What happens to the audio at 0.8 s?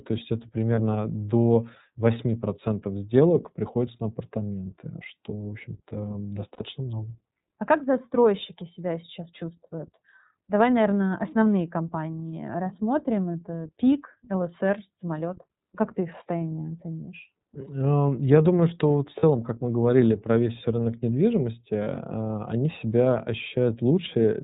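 A lost iLBC frame hits at 0.75 to 0.79 s, right after "есть это". A single 30 ms packet went missing. The decoder filled the gap by repeating the last pitch cycle mixed with noise. It sounds like a brief held, faintly buzzy vowel. The speech recovers at once, since each iLBC frame is decoded on its own.

Underneath is the iLBC codec, in 30 ms frames. Nothing above 4 kHz survives. The coding damage is plainly audible as a rough, synthetic edge on the speech.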